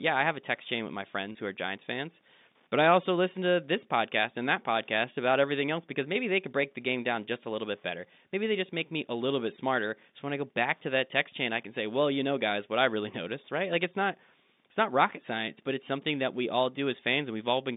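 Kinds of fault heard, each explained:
Packet loss with pitch repetition: at 1.32 to 1.35 s, about 30 ms of the telephone-band speech drops out, a gap that fits a single lost packet. The receiver fills it by repeating the last pitch cycle it received, looping that one period instead of leaving silence. Because the gap is so short, the repetition never fades away, and the result is a brief, slightly held, buzzy tone where the voice should keep moving.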